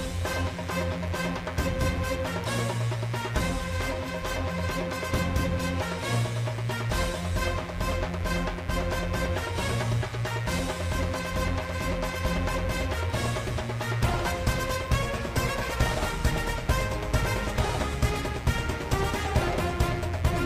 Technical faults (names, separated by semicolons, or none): mains buzz